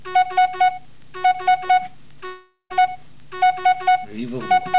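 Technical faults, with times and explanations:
2.26–2.72 s, long network dropout: the sound gives way to a fading buzz-like continuation, then near-silence for about 0.13 s, likely a lost stretch of audio concealed by the receiver.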